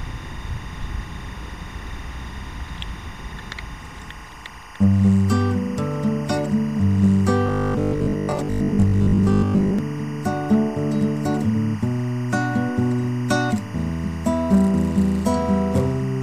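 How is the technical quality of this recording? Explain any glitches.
The recording has two technical faults: a tonal interference running through the whole clip, and a short stretch where the sound turns mechanical.

Timecode bleed sits behind the sound from start to finish, about 20 dB below it. Linear timecode from a neighbouring track or cable has leaked into the audio path. Its square wave flips between two pitches around 1 and 2 kHz. The result is a steady chirping warble. Unlike mains hum or a single whine, it alternates between two tones and has a rhythmic texture that follows the code's 24 frames per second.

From 7.47 to 9.79 s the sound becomes robotic, most likely from repeated short buffers. When new audio arrives too slowly, playback fills the gap by looping the most recent slice. Here roughly 70 percent of the audio is replaced by repeats. The loop imposes a rigid 50 Hz buzz, which fits a 20 ms buffer, while the underlying contour still comes through loosely. 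A dropout would leave silence instead, and a plain stutter would repeat longer, recognisable chunks.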